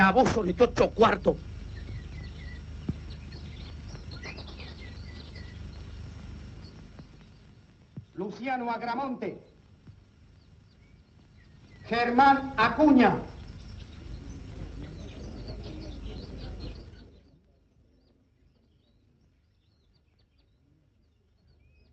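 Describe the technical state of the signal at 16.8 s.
At 16.8 s the level is falling with zipper noise, from 16.72 to 17.37 s: the gain drops in audible steps of 4 dB, around ten a second, for roughly 25 dB in all. Each unsmoothed jump ticks, unlike a clean fader-style fade.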